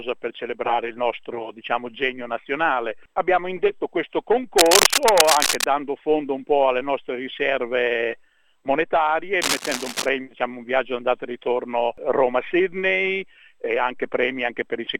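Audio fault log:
4.58–5.68 s and 9.42–10.09 s: cable scratch noise. Rough, uneven scratching bursts sit over the sound, the first about as loud as it, the second about 5 dB quieter, likely from a worn connector shifting its contact. Spectrogram: ragged broadband vertical streaks. Waveform: dense, spiky clusters.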